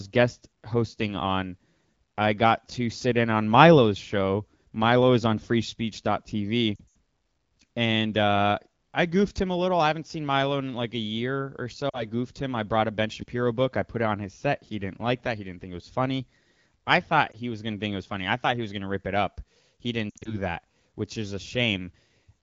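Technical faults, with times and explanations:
6.75 to 6.82 s, lost AMR speech frames: speech goes smeared and thin. About 120 ms of audio is missing, scattered over 200 ms, with the longest gap 80 ms. The decoder kept repeating its last good pitch and vocal tract settings at falling gain, which fits roughly six lost frames.
11.89 to 12.05 s, lost AMR speech frames: just after "year or so" and before "goofed him I brought", there is a short warble and dip. About 40 ms is missing, which fits two lost frames. The decoder stretched the previous sound at reduced level until good frames returned.
17.31 to 17.36 s, lost AMR speech frames: a single brief dropout-like dip falls between "was funny I thought" and "he was going to". The 20 ms gap points to one failed frame. The decoder reused the last good parameters with lowered gain.
20.10 to 20.38 s, lost AMR speech frames: speech drops to near silence, then recovers roughly before "that which is a". 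About 120 ms is lost in gaps spread over 160 ms, the longest 60 ms. The wideband decoder fades repeated frames quickly, and its HD Voice sound suggests a rate around 12.65 kbit/s.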